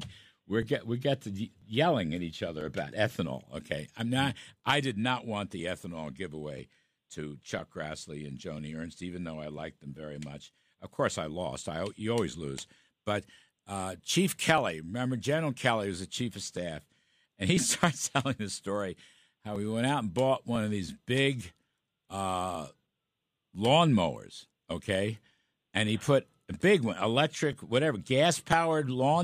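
From 0.63 s to 28.52 s the speech carries periodic USB or driver dropouts: a tick roughly every 1.00 s, about thirty in all. Each time something blocks the audio path, a few milliseconds of signal are skipped rather than filled with silence, so the waveform jumps and clicks. Random crackle is scattered and uneven, but these ticks keep strict clockwork spacing and vanish whenever the speech pauses.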